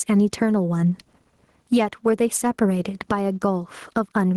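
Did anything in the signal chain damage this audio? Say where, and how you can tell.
Yes. Gain pumping runs through the whole speech clip, a swing of around 10 dB. Likely input gain set far too high, with a fast limiter clamping it. A noise gate would silence the gaps rather than raise them.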